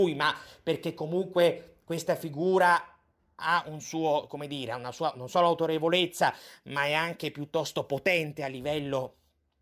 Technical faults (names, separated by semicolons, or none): none